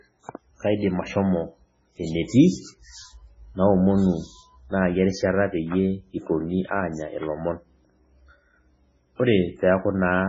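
Throughout, the speech is likely damaged by MP3 compression at a very low bitrate. Nothing sounds above 7.6 kHz. Starved bands flicker, leaving a heavy watery, swirly texture.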